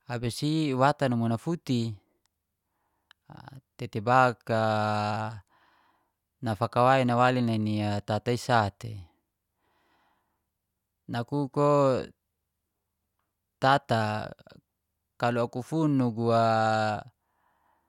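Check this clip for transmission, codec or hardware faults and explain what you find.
No transmission, codec or hardware faults are audible here.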